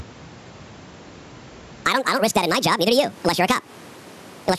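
Gain pumping runs through the whole clip: the gain ducks under every loud syllable by about 15 dB. This is likely a fast limiter clamping down on input gain set far too high, squashing loud and soft passages together.

A section at the wrong speed begins at 1.85 s and lasts to the end. That part plays 1.71 times too fast, raising pitch by roughly ten semitones so the speech sounds high and hurried, likely from playback fitted to the wrong clock.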